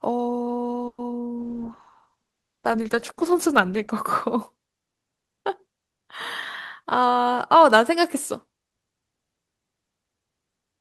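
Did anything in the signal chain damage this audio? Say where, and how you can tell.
Yes. In the network and call-processing stage there is a call audio freeze at 0.87 to 1.00 s. The speech stops and is replaced by a fading continuation of the last sound. That lasts 110 ms, with about 60 ms of it near silence. Then the speech resumes exactly where it broke off, so nothing is lost. The likely cause is late packets draining the jitter buffer. The receiver concealed the hole, and the gap added 110 ms of delay.

At the codec stage there is a call bitrate drop from 1.39 to 3.98 s. The speech turns coarse and watery, and the top end dulls. That points to the encoder falling from around 40 kbps to around 13 kbps after the bandwidth estimate collapsed. It stays at that floor for about 2.5 s. With so few bits, Opus quantises roughly and trims high frequencies. Clarity returns only once the rate climbs back.

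There is a jitter buffer speed-up in call processing from 6.83 to 8.61 s. The speech runs about 7 percent faster, yet the pitch does not rise. That is the sign that short pitch-period chunks were cut out repeatedly rather than the audio being resampled. Roughly 150 ms was removed in total. The buffer had built up excess audio, and the receiver trimmed it to bring latency back to target.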